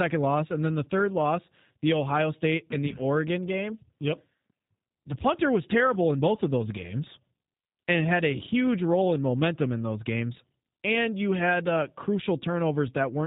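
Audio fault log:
Throughout: G.729 codec. The speech was squeezed through a low-rate VoIP codec, with a sound that fits 8 kbit/s G.729A, rebuilt from a vocal tract filter, pitch predictor and sparse pulses, so nothing above 4 kHz survives and voices come out muffled, rough and plainly synthetic.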